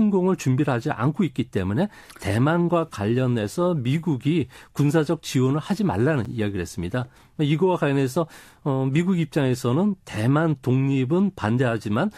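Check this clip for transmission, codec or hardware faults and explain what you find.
One fault turns up in this speech clip. A gap between stream segments at 6.25 s: two consecutive segments, each about 6 s long, leave a 7.3 ms hole in their timing that the player fills with silence, heard as a brief hard-edged dropout with no audio lost.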